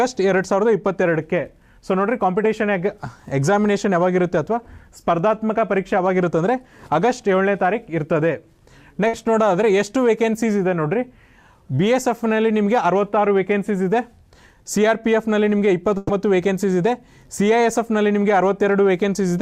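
The audio has two bursts of packet loss. At 9.07 to 9.16 s about 60 ms goes missing, and at 15.97 to 16.12 s about 120 ms. Each time the receiver stretches the last sound into a fading held buzz or hiss, then resumes further on. On a spectrogram each gap shows as frozen, smeared bands that dim, then an abrupt jump. The waveform shows a repeating, decaying pattern before the cut.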